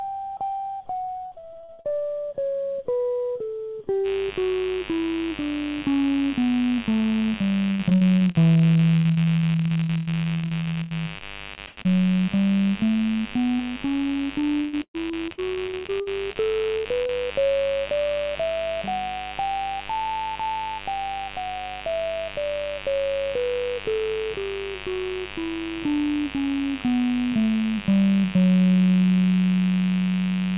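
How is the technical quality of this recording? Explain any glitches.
Technical quality is poor: the music passes through a narrowband call path, with nothing audible above 4 kHz, and it carries three kinds of transmission dropout plus a constant electrical buzz.

Repeated packet loss (robotic sound) occurs from 1.04 to 2.03 s, from 7.71 to 11.86 s and from 14.40 to 16.37 s. Packets went missing again and again, and each hole was patched by extending the preceding sound. Roughly a third of each stretch is filled this way, in 12, 32 and 14 separate gaps, the longest lasting 60, 101 and 123 ms. The music turns choppy with pieces dropped out. Unlike a single burst, the damage recurs for seconds at a time.

Mains buzz starts at 4.03 s and runs to the end. Switching spikes from a dimmer, rectifier or unshielded lead enter twice per 50 Hz cycle, stacking harmonics up into the kilohertz range. 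It sits about 15 dB below the music as a steady, raspy buzz. That rasp and its constancy separate it from a smooth, pure hum.

A burst of packet loss hits at 16.77 s, removing about 80 ms. The receiver extended the last sound while fading it, so a held buzz or dying hiss bridges the hole, and the music resumes further along with that section missing. It is a single isolated gap, not the repeated chopping of the earlier stretches, and it is longer than the short losses that follow.

Short concealed packet loss appears twice in quick succession, starting at 17.03 s and 17.06 s, each about 20 ms. The decoder filled each small hole by continuing the previous sound, pitched or noise-like, then blended back into the real signal. Each one is heard only as a brief smear or wobble, too short to produce the held tone of the burst just before.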